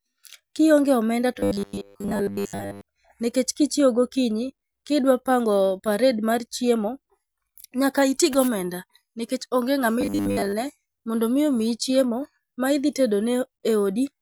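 From 1.39 to 2.81 s, and again from 10.01 to 10.53 s between "onge ng'ama" and "mondo mi omiyi chiemo", the speech takes on robotic sound from repeated short buffers: a rigid, metallic buzz at 100 Hz that loosely tracks the words. The likely cause is audio arriving too slowly, with playback looping the last 10 ms or so to fill the gap, so most of the real signal in those stretches is skipped.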